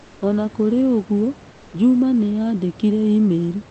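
At 0.00 to 0.21 s and 1.51 to 1.73 s, comfort noise replaces the background. It sounds flat and featureless, about 2 to 3 dB quieter. Likely cause: Opus discontinuous transmission.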